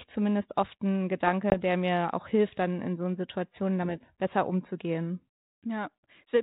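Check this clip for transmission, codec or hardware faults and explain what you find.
One fault: packet loss on an ADPCM call, from 1.50 to 1.55 s, between "zumindest oft ein" and "der mir auch hilft". About 20 ms, roughly one packet, drops to silence. The decoder's predictor then mistracks, so speech resumes briefly slightly distorted. The G.726 ADPCM coding, which sounds like 32 kbit/s, adds light grain.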